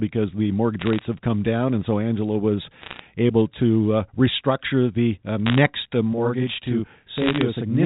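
Bit errors on the digital phone line show up as bursts of sharp ticks and crackle at 0.81–1.05 s, just before "have come down", then at 2.81–3.02 s ahead of "able to uh restructure" (the densest burst, around one percent of bits flipped), 5.46–5.58 s right after "uh restructure the uh", and 7.18–7.41 s. From 6.13 s to the end there's channel delay (doubling): one channel runs 40 ms late and gets summed into mono, so you hear a slap-like second copy at the same level.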